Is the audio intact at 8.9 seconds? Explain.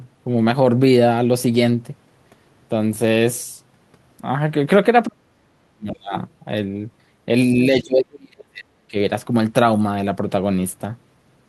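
No. The speech is dipping from 7.55 to 8.96 s, at times by around 35 dB, in uneven pieces totalling about a second. This is speech suppressed in double talk. The likely cause is an echo canceller that, with both sides talking, mistook this talker for loudspeaker echo and attenuated them.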